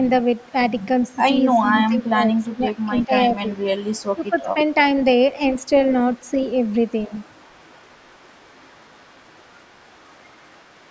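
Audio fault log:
0.78–1.64, 1.97–2.06, 2.42–3.06, 3.47–4.65 and 5.51 s to the end: echo leak. A faint copy of the voice trails about 353 ms behind, roughly 25 to 35 dB down. The likely cause is a far-end echo canceller letting loudspeaker pickup through.
1.61–3.58, 4.15–4.57 and 7.08–7.12 s: speech suppressed in double talk. The voice dips by up to about 15 dB in patches, roughly a second in the first stretch. The likely cause is the canceller ducking both talkers during overlap.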